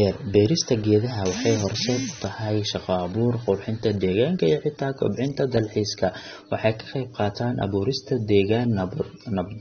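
From the first second to the end, the speech has a hard ceiling with nothing above 6.3 kHz, so it sounds dull and boxed-in. Sibilants come out fizzy and smeared, and there's a watery warble on the sustained sounds. That's the signature of AAC compression, likely AAC-LC pushed to a low bitrate, roughly 24 kbps by the sound of it. The encoder pulls its cut-off down and starves the upper bands, and that damage is plainly audible throughout.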